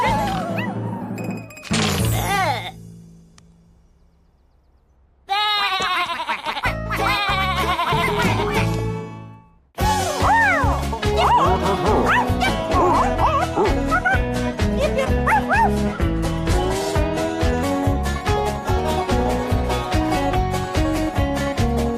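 From 12.49 s to 17.63 s a section at the wrong speed plays at 0.881 times normal, so the sound turns slower and about two semitones deeper, likely from a clock mismatch. A spectrogram shows the harmonics dropping lower and features stretching wider across that span.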